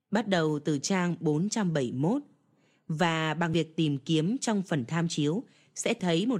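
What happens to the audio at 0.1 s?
Nothing goes wrong at 0.1 s; the audio is intact at that point.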